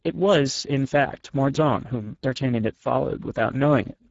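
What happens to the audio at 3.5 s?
At 3.5 s you're hearing Speex codec damage, present across the whole clip rather than starting there. The speech sounds hoarse and noisy, like a lean CELP model straining for excitation detail, which fits a bitrate near 10 kbps, and nothing comes through above 7.7 kHz.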